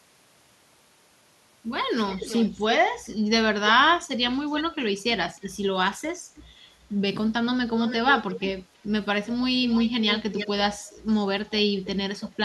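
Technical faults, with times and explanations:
2.07–3.09, 4.56–4.75, 6.07–6.43, 7.71–8.44, 9.28–9.34, 9.65–10.48 and 12.2–12.31 s, echo leak: a distinct second copy of the speech trails the original by about a third of a second, drifting from 317 to 330 ms, and sits about 10 to 20 dB below it. Likely a far-end loudspeaker whose echo canceller let some of its own playback return. A discrete, repeated copy at a nearly fixed lag separates this from room reverberation, which smears continuously.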